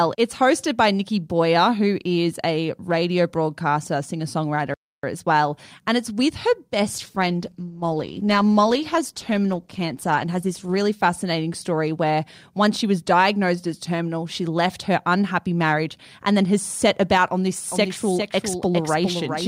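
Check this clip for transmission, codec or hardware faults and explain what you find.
Three faults are audible in this speech clip: a playback stall, a call bitrate drop and a doubled audio track.

The playback stall comes at 4.74 s, just after "a radio broadcaster singer". The speech cuts out for 0.29 s and resumes at "as well". The player likely ran short of data or was briefly blocked, so the output went silent until it recovered.

The call bitrate drop runs from 6.9 s to 12.09 s, starting after "it's with her" and clearing before "once she was diagnosed". The bandwidth estimate fell, so the encoder dropped from 64 kbps to 15 kbps. At the lowest rate, held for 3.38 s, the speech turns coarse, watery and dull as the highs are cut.

The doubled audio track starts at 17.71 s, after "set about on this", and lasts to the end. A second full-band copy of the speech trails about 0.4 s behind, around 5 dB quieter. 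It has no room colour and cuts in abruptly. A slower second capture path is the likely cause.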